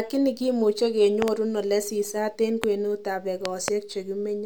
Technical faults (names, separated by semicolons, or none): loud pop